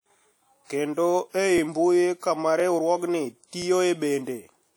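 From the start and all the way through, the speech carries the smeared, slightly swirly texture of a heavy low-bitrate encode, even though the file itself is a roomy MP3. The likely cause is low-bitrate audio saved at a high bitrate, with something like a 48 kbit/s WMA pass upstream. Re-encoding at around 192 kbit/s just preserves that damage rather than undoing it, and the band stops at about 20.1 kHz.

On top of that there are overlapping chunks: little stutters at 0.56–0.58, 1.58–1.6, 2.6–2.62 and 3.62–3.64 s. Each one replays a 20 ms slice. The audio seems to be handled in roughly 1-second blocks, and each block starts a touch before the previous one ends, so the seam doubles up. That gives a regular tick-like hiccup about once a second.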